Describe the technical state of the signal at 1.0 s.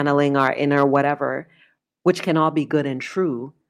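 Microphone overload runs from 0.77 to 0.97 s, likely from input gain set too high: peaks exceed the converter's limit by about 2 dB, so a small fraction of samples are flattened, giving a harsh crackle. Microphone volume stepped down at 1.02 s: the level falls abruptly by 3 dB, voice and background together, likely the call software cutting input volume after that overloaded stretch.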